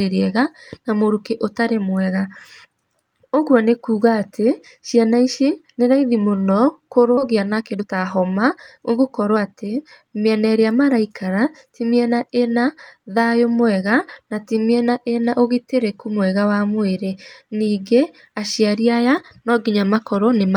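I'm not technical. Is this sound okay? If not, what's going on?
No. At 7.17 s the speech suddenly jumps forward, losing about a second. This is a skip ahead: that stretch was dropped and the two sides joined directly.

From 7.31 to 9.50 s the talking sounds hurried, about 14% faster at normal pitch. This jitter buffer speed-up trimmed tiny slivers repeatedly, removing roughly a third of a second of backlog.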